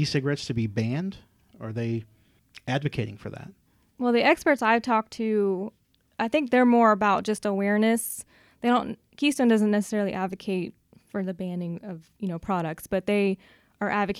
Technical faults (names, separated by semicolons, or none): none